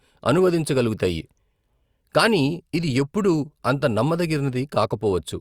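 Nothing stood out on listening to this speech recording.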